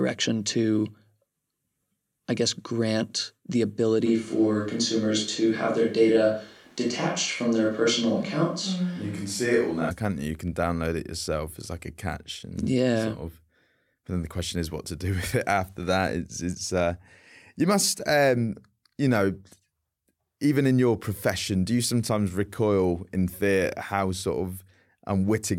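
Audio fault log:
4.08–9.89 s, switch to a distant microphone: the close microphone likely dropped out, so a farther one took over; the sound turns abruptly roomy and hollow, with thinner bass.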